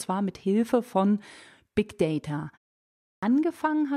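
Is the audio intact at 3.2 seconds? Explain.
No. A clipped start after a pause runs from 3.15 to 3.23 s. After a 0.66 s silence, the output path has gone idle and needs time to wake, so the first 75 ms of speech is lost and the sound begins abruptly, without its onset.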